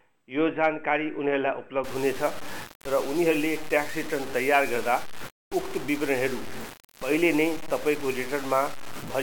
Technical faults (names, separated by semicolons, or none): low bit depth without dither